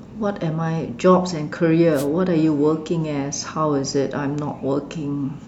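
Speech recording with a wireless microphone noise hit from 1.93 to 2.07 s: a brief burst of static as the FM radio link fades and receiver noise swamps the signal.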